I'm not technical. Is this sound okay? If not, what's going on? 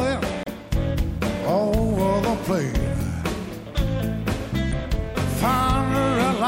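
No. There are two short glitches, at 0.43 to 0.47 s and 4.69 to 4.73 s. Both come from damaged data in a compressed stream. Part of the file is wrong, so the player briefly loses its place and makes a quick blip.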